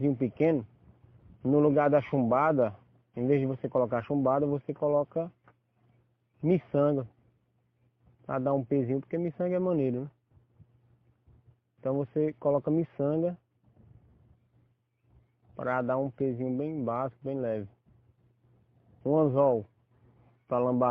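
Nothing in the audio points to a technical fault at any point, as the signal holds steady without any disturbance that a listener could trace to the recording or playback chain.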